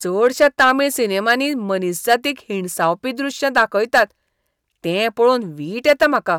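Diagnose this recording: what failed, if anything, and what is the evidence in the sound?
Hard clipping on the speech, at 0.26–0.71 s, 1.28–1.34 s, 2.10–2.14 s, 3.57–4.02 s and 5.88–6.31 s, driven about 4 to 7 dB past full scale. Peaks exceeded what the converter or fixed-point sample format could pass, so their tops were sliced flat, spraying harsh high harmonics into crackle and fuzz on loud syllables. Unlike soft saturation or codec distortion, the harshness switches on abruptly at peaks and vanishes once the level drops.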